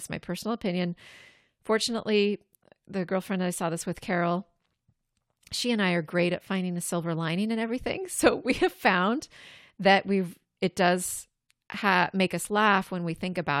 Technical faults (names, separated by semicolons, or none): none